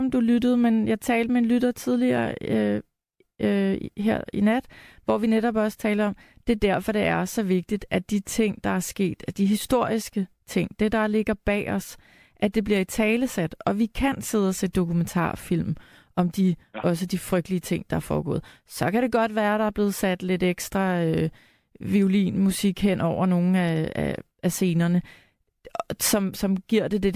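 No technical faults can be heard anywhere in this speech recording. Nothing at any point in time calls for comment.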